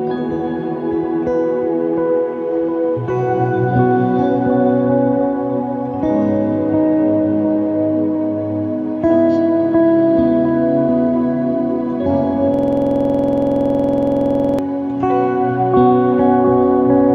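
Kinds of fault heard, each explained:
System hang loop: the host stalled while the audio hardware kept replaying its ring buffer. From 12.54 to 14.59 s, one 46 ms slice of sound repeats exactly 44 times, producing a hard stutter at 21.5 Hz, which fits a 2048-sample buffer.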